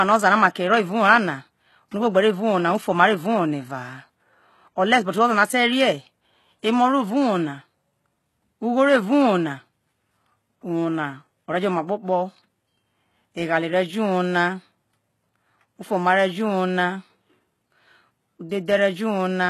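Throughout the speech, the audio was likely squeezed through HE-AAC compression at a very low rate, with the damage consistent with something near 16 kbps. The codec kept only the lower band and rebuilt the treble by copying lower bands upward, so the top end sounds synthetic and stops dead at about 12.3 kHz. The copied harmonics don't mesh with the real ones, and s sounds come out gritty, metallic and lisping.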